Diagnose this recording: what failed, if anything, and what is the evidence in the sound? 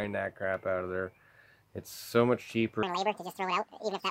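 A section at the wrong speed starts at 2.83 s and runs to the end. The sound jumps 1.87 times faster and rises roughly ten semitones, turning high and hurried. Tempo and pitch shift together, so this is likely a playback or editing stage running that section on the wrong clock.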